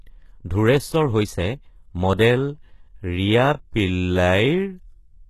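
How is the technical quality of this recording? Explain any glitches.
The recording has two audible faults.

Throughout, plainly audible HE-AAC compression artefacts likely come from a low-bitrate encode, fitting roughly 16 kbps. Treble is rebuilt from copied lower bands, and nothing sits above 12.3 kHz.

From 2.30 s to the end, a time-stretched section slows the speech to 0.592 times its pace while pitch stays fixed, likely by repeating short pieces, so it drags.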